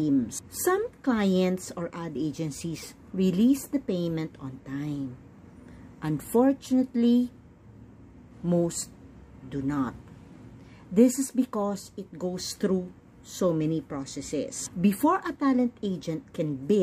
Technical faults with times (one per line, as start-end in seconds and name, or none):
none